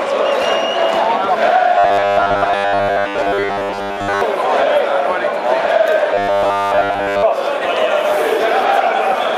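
A rigid, metallic buzz fixed at 100 Hz is imposed on the sound from 1.78 to 4.21 s and again from 6.14 to 7.23 s. This is robotic sound from repeated short buffers, likely caused by audio arriving too seldom, so roughly 10 ms chunks repeat while most real audio is skipped.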